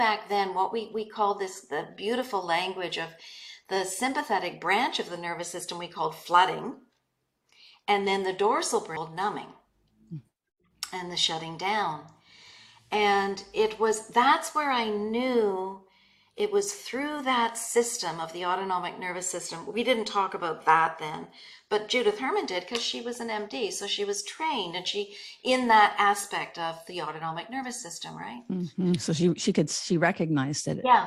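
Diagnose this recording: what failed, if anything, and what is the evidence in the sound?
A CD skip at playback: at 8.96 s a tick and a brief mute of a few milliseconds, after which the sound resumes from a different point. The laser jumped tracks on the disc's spiral. Unlike a buffer dropout, the material discontinuously jumps.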